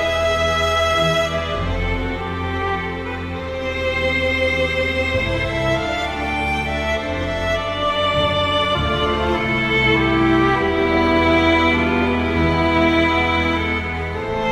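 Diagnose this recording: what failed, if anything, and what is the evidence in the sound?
Nothing failed, and no stage in the chain leaves any audible evidence of a problem anywhere in the recording.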